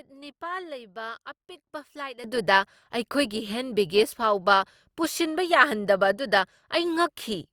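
At 2.24 s the speech and its background noise leap together by about 15 dB and stay there: a sudden gain jump, likely an unramped digital gain change.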